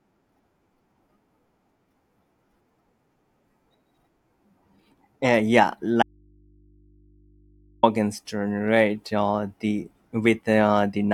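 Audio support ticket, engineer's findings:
Speech cuts out abruptly at 6.03 s and returns at 7.83 s, about 1.8 s lost. Gap holds only faint mains hum, roughly 35 dB below the speech. Audio dropout to a faint residue. Likely a signal break upstream, with the downstream input left open.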